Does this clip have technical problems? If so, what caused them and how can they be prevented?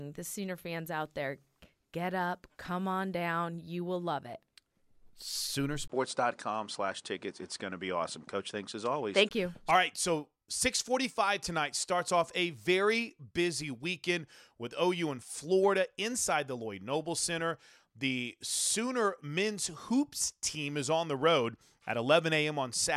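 Yes. From 5.88 s to 9.31 s, the speech turns duller, with nothing above 10 kHz. A 20 ms gap marks the switch. The level shifts by roughly 5 dB, and a faint new background noise appears. The likely cause is the input switching to a poorer device with a narrower band and its own tone. To prevent it, lock the input device in the system settings before recording.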